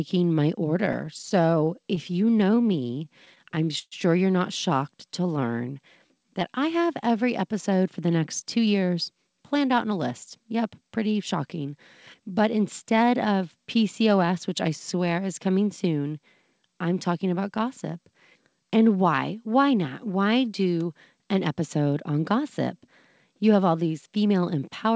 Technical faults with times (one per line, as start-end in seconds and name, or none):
0.86-2.86 repeated stalls (stutter)
2.91-3.62 jitter buffer slow-down
3.25-3.94 repeated stalls (stutter)
4.92-6.52 jitter buffer slow-down
8.22-9.93 jitter buffer speed-up
10.40-11.68 jitter buffer speed-up
12.20-13.23 jitter buffer speed-up
24.23-24.62 jitter buffer speed-up